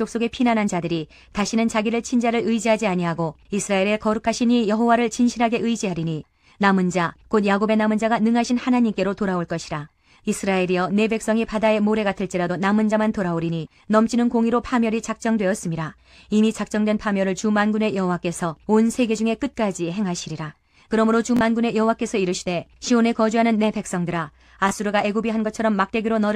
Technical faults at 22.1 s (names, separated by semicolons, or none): none